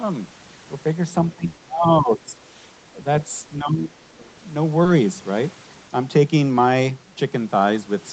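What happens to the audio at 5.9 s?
At 5.9 s the speech runs on intact, with no dropout, glitch or other fault at that moment.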